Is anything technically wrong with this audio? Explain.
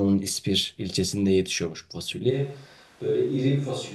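Yes, there's one problem. At 2.32 s the speech abruptly turns roomy and hollow, loses its low end, and drops about 5 dB, with room noise coming up to roughly 30 dB below the voice, and it stays that way to the end. That's a switch to a distant microphone: the close mic's signal likely dropped out or got left out, so the recording falls back on one farther away that picks up more room and less body.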